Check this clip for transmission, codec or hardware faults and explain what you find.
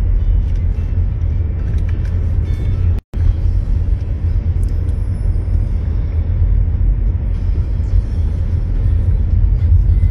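There is one fault, a gap at a join of encoded pieces. From 2.99 s to 3.14 s the sound drops out for 150 ms. The audio was likely encoded as separate pieces about 10 s long and joined without trimming. The encoder's start-up delay and the padding of the previous piece's last frame both stayed in. You hear continuous sound stop, then resume where it left off. The edges are smeared by the codec.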